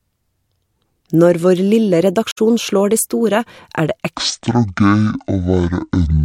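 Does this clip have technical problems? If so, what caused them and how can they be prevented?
Yes. At 2.31 to 2.38 s, just before "slår de store er", the speech fades away into a brief silent gap and fades back in, with soft edges. This is AAC frame loss with muting. Roughly 64 ms of coded audio never reached the decoder, which fits three lost frames. The decoder zeroed their spectrum, and its overlapping windows smeared the cut into a gentle fade out and in. Reliable transport with retransmission or error correction, or packet-loss concealment in the decoder, would prevent it.

From 4.16 s to the end, the voice suddenly turns deep, slow and dragging. It runs at about 0.53 times normal speed, and the pitch drops by around ten semitones together with the tempo. This is a section at the wrong speed, likely caused by a player or editing step that treated this stretch as having a different sample rate or clock than it was recorded at. 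Checking that every segment's sample rate matches the playback or project rate before joining or rendering would prevent it.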